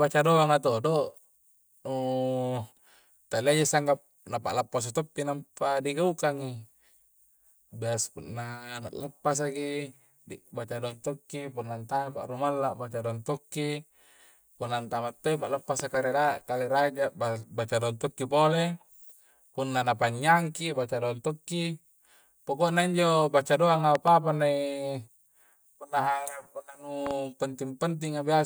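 Loud pops at 15.80 to 15.97 s (after "punna antama to'i"), 23.95 to 24.10 s (after "pokonya injo baca doanga") and 27.07 to 27.13 s. Each is a sharp double thump about 10 to 15 dB above the speech, which carries on underneath. The cause is likely a voltage spike from a plug, switch or static.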